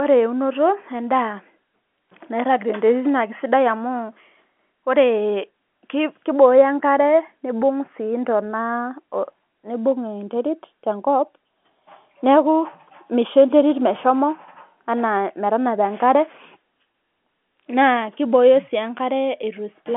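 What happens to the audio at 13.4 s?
Nothing goes wrong at 13.4 s: the speech continues intact through that moment, carried in the usual narrow telephone band of the G.711 line.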